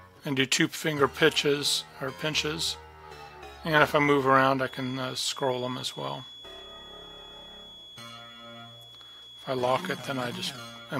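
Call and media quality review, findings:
Thin, steady feedback whistle at 3.4 kHz, swelling and fading slowly in level, about 20 dB below the main sound, from 4.57 s to the end. Likely acoustic loop, loudspeaker into microphone, held at the edge of feedback without running away.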